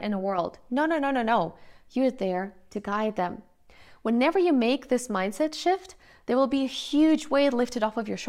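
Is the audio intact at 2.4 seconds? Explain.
Yes, the speech at 2.4 s is intact, with no dropout, click, distortion or other fault at that moment.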